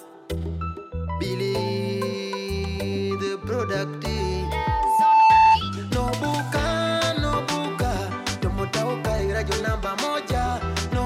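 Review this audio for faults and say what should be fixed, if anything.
Loudspeaker feedback squeal, 4.14 to 5.60 s: the microphone re-amplifies its own loudspeaker, so an 885 Hz tone swells over about a second, unlike a steady hum. Lower the gain or separate microphone and loudspeaker.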